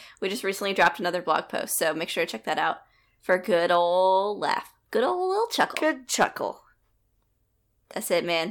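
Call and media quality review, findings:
Hard clipping: crackly fuzz on speech peaks at 0.80–0.88 s, 1.30–1.36 s, 3.31–3.34 s, 5.60–5.77 s and 6.21–6.24 s, overdriven by about 7, 2, 1, 6 and 7 dB. Level stage exceeding converter or format limit, peaks flattened. Unlike soft saturation, the edge is abrupt and bright, confined to peaks.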